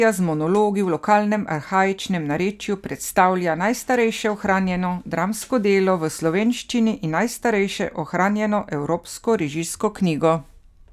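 Speech, no technical faults heard.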